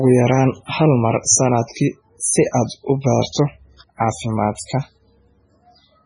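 From start to finish the speech carries a hard treble ceiling, with nothing above about 10.4 kHz, and a heavy watery, swirling texture, with s sounds turning metallic and chirpy. The likely cause is MP3 compression at a very low bitrate, around 16 kbps. Short of bits, the encoder chops the top band and lets weak frequency lines blink on and off between frames. That frame-to-frame flicker is what separates it from a plain low-pass filter, which would dull the treble smoothly without any swirl.

At 4.55 to 4.59 s an attack arrives with a short hiss in front of it, about 32 ms long, and the onset itself sounds blunted. This is pre-echo: the block's quantisation noise, sized for the loud attack, is spread back over the quiet moment just before it. Reverb or an echo would trail after the sound, but this smear comes before it and is noise rather than a copy of the sound.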